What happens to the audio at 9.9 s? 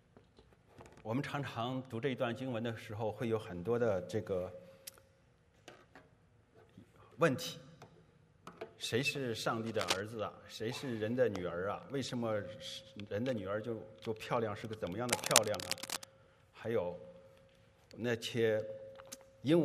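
Around 9.9 s you're hearing cable scratch noise, running from about 9.66 to 10.01 s. It's a burst of dense, ragged scratching, roughly as loud as the sound itself, likely from a worn cable or connector being moved so its contact resistance jumps around rapidly.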